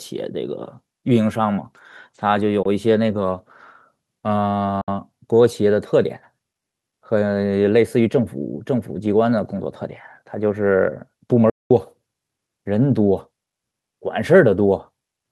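Three short gaps in this speech clip, at 2.63–2.66 s, 4.81–4.88 s and 11.50–11.71 s, are most likely a Bluetooth dropout, where audio packets missed their delivery window to the headphones and were discarded. About 20 ms, 61 ms and 203 ms of sound vanish, which fits roughly one, three and ten lost packets. The speech then picks up further along, as if it had kept playing. The waveform shows flat silent stretches with abrupt or briefly faded edges, and the spectrogram shows blank vertical bands across all frequencies.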